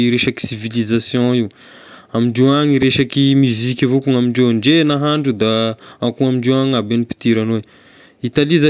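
No technical faults can be heard anywhere in the recording.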